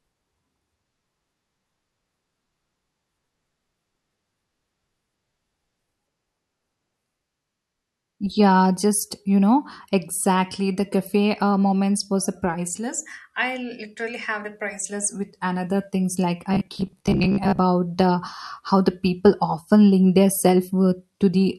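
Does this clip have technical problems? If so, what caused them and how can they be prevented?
Yes. Robotic sound from repeated short buffers runs from 16.54 to 17.59 s, between "with another things like" and "the how the people". It is a rigid, metallic 67 Hz buzz, likely from roughly 15 ms chunks being replayed over about half the stretch. A spectrogram would show evenly spaced horizontal harmonic lines, and the waveform would show identical short cycles. Giving the audio path enough buffering to absorb delivery delays would prevent it.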